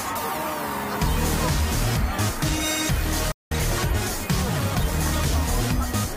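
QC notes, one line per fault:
3.32–3.52 s, playback stall: the sound stops abruptly in mid-flow and the output drops to silence for roughly 194 ms, then the audio picks up again after the gap. The break is long enough to hear as a hole rather than a click. The likely cause is the player running short of data or its output thread being briefly blocked, so nothing reached the output until it recovered.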